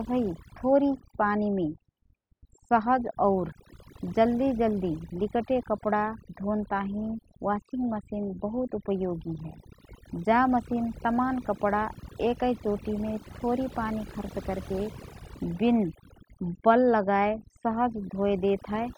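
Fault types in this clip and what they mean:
Overdone noise removal: a noise reduction stage was pushed far too hard, so any frequency band whose level sat close to its noise estimate was pulled down steeply or shut off entirely, and the softer parts of the speech fell below that threshold along with the noise. Across the whole clip the background collapses to an unnatural near-silence dotted with chirping specks.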